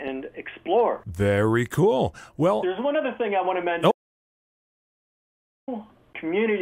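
An audio dropout to silence runs from 3.92 s to 5.68 s. The sound cuts off mid-flow and about 1.76 s of silence follows, with no room tone left. The input was likely lost while zeros kept being written, so nothing from that stretch survives.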